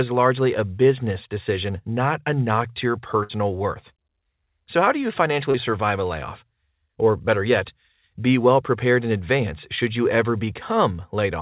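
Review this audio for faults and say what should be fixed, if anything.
A burst of packet loss at 3.23 to 3.32 s, after "a knock to your", is heard as the last sound held and faded for about 60 ms before the audio resumes with roughly 60 ms missing. Prevent it with a deeper jitter buffer or forward error correction so consecutive lost packets can be recovered.

Short concealed packet loss at 5.51 to 5.57 s, between "how do you" and "survive a layoff", leaves a brief smear where about 30 ms was replaced by an extrapolated continuation. Prevent it by improving network stability or enabling packet redundancy on the link.

The band-limited sound, with nothing above 4 kHz, fits a G.711 mu-law call path and is expected for that codec rather than a fault.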